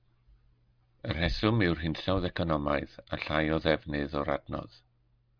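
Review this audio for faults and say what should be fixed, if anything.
Nothing stood out on listening, so there is nothing here that needs fixing.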